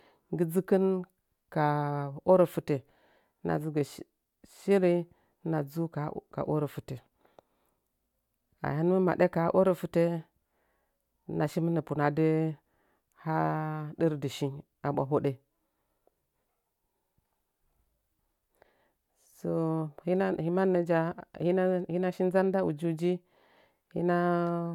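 No technical faults can be heard anywhere in the speech. Nothing in the recording needs a timestamp or an explanation of a cause.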